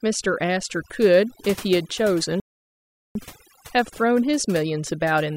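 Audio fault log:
throughout overdone noise removal: The noise reducer is set too hard, so any frequency band that dips near its noise estimate is pulled far down or switched off, and quieter parts of the speech vanish along with the noise. Between phrases the background drops to near silence scattered with twinkling specks. On a spectrogram the gaps look unnaturally black, dotted with isolated bright flecks, and the speech harmonics appear ragged and patchy.
2.40–3.15 s playback stall: The audio stops dead partway through the flow and stays silent for about 0.75 s before carrying on. The player was likely starved of data or had its thread blocked, leaving it nothing to output until it recovered. On a waveform this shows as a flat line with abrupt edges at both ends. On a spectrogram it is a clean vertical blank band cutting straight across all frequencies.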